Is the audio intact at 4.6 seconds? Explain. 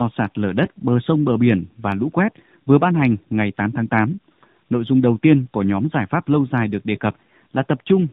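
No. At 4.6 seconds, as throughout the clip, the speech carries tandem speech coding: it was coded twice with AMR-NB around a G.711 link, each coder reworking the last one's damage. Unlike a single low-bitrate codec, it sounds rougher, noisier and more warbly, with nothing above 3.8 kHz.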